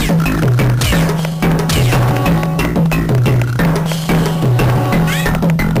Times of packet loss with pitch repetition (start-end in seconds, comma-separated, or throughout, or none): none